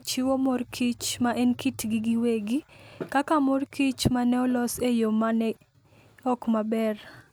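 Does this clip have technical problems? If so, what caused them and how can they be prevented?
No, nothing in this speech clip stood out as a technical problem on listening, so there is nothing here that calls for prevention.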